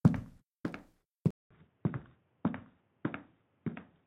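Input switched to a poorer device at 1.31 s: after a 0.2 s gap, the audio turns dull and boxy, with nothing above 3.8 kHz and faint new background noise, likely from a narrower-band microphone.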